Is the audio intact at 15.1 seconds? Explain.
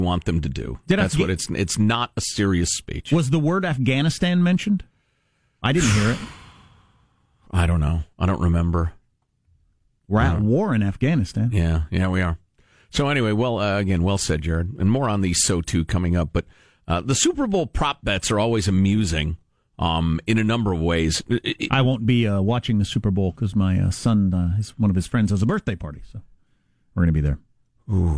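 Yes, at 15.1 seconds the speech plays through intact, with no dropout, click, distortion or other fault at that moment.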